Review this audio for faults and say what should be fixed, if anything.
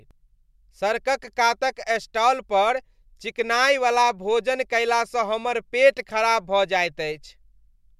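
Nothing to fix: no faults are audible anywhere in the speech.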